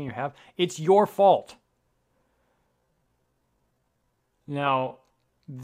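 Software likely stretched the second half of this speech recording to fill a longer slot, holding pitch steady by repeating short slices of audio rather than slowing the playback itself. From 2.64 s to the end at 5.64 s, the result is a time-stretched section running at about 0.6 times normal speed: the pace drops abruptly while pitch stays put, and the slowed speech drags.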